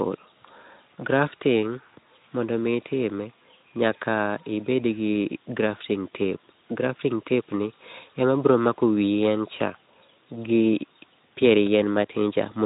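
Speech recording; no technical faults can be heard.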